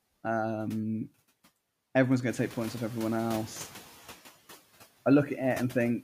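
A noise suppressor runs over this speech clip throughout, cutting the steady background by about 15 dB frame by frame, so the residue sinks between words and rises beneath them. From 2.29 to 3.9 s the noise suppressor is catching up: the room noise jumps by about 12 dB at roughly two and a half seconds, and the suppressor's noise estimate lags, reducing it by only about 6 dB until it adapts over 1.6 s and the noise sinks back down.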